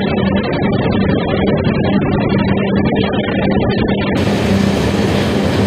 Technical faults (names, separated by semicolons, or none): adaptive stream starting at a low bitrate